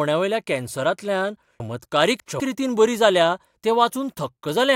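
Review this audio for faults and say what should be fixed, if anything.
Chunks out of order from 1.6 to 2.4 s, before "रितीन बरी जाल्या तें": one 200 ms chunk plays three chunks late, leaving three hard joins that show as vertical spectrogram streaks and waveform steps. Fix it by sequence-numbering chunks and reordering them in the buffer before playback or writing.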